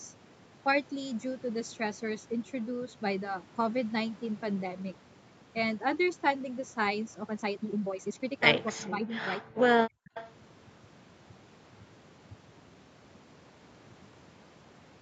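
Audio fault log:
7.20–15.01 s, time-stretched section: from 7.20 s to the end the pace jumps to about 1.65 times normal while the pitch stays put, so the audio turns choppy and rushed. The likely cause is software dropping short pieces to shorten the passage. A plain speed-up would have raised the pitch as well.
8.66–8.72 s and 10.14–10.33 s, echo leak: a faint delayed copy of the talk, about 20 dB below it, trails the original by 254 ms the first time and 327 ms the second. This is likely loudspeaker sound that the far end's echo canceller failed to remove. Unlike room reverb, it is a distinct, separate repeat rather than a smooth decay.
8.72–10.14 s, speech suppressed in double talk: the talker's level dips by as much as about 40 dB, in pieces adding up to roughly a second, while the other side is talking. The likely cause is an echo canceller that couldn't tell the talker from its own loudspeaker echo and turned both down. 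Unlike a network dropout, the loss follows the overlap between the two sides.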